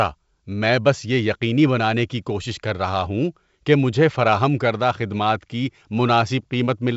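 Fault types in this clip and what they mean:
No faults can be heard.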